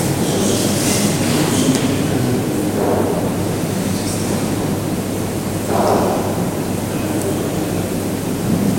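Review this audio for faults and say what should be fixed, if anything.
At 7.0 s the sound jumps ahead, skipping roughly a millisecond or two with no gap. This is likely a dropped buffer (overrun): samples weren't read before the hardware overwrote them, so the surrounding audio is spliced directly. On a waveform it appears as a sudden discontinuity; on a spectrogram, a thin vertical broadband line. Larger capture buffers or higher priority for the recording thread would prevent this.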